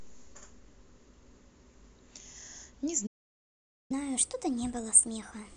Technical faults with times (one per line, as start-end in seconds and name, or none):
3.06-3.91 playback stall
3.91-5.56 catch-up at higher speed